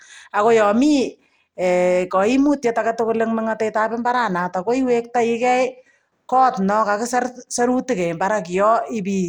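A speech recording affected by periodic clock jitter for its whole length. The converter clock is being shaken by interference at around 300 Hz, so every component of the voice carries sidebands spaced that far above and below it, strongest on the higher frequencies. The result is a rough, metallic edge that drops away in the pauses.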